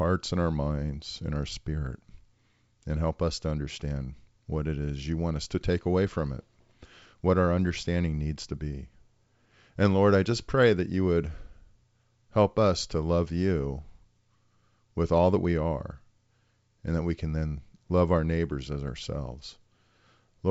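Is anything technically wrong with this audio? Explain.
No, nothing is technically wrong with this audio.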